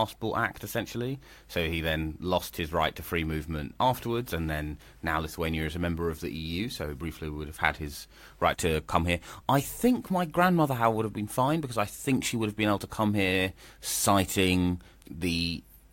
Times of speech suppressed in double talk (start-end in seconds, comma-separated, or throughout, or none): none